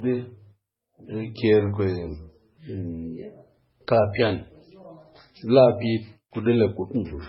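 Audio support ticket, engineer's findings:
Transcoding between lossy codecs, throughout the speech, whole clip. Nothing above 5.5 kHz; band edge sounds hard and dull. Low-bitrate MP3 artefacts sit under a second layer of HE-AAC coloration, both audible together. Likely cause: speech first squeezed through a very low-rate MP3 stage, consistent with around 16 kbit/s, then re-encoded as HE-AAC, consistent with about 40 kbit/s. Second encoder spent bits on first encoder's damage and added its own; the lowest cut-off in the chain survived.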